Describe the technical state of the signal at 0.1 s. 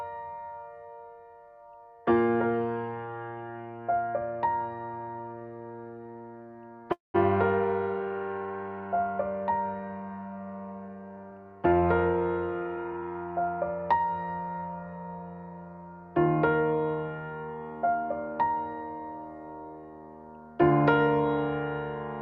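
At 0.1 s the signal is intact, with no audible technical fault.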